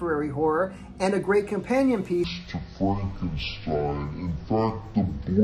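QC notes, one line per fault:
2.24–5.44 s, stereo read as mono: from here the sound runs at half speed, an octave low. Interleaved left and right samples are being read as one channel.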